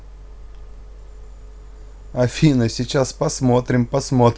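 No technical faults can be heard in the speech on this recording.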